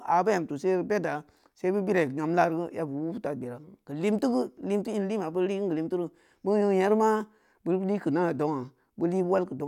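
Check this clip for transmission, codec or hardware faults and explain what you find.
No transmission, codec or hardware faults are audible in this speech recording.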